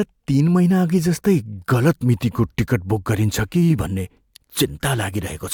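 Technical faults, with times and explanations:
No technical faults are audible.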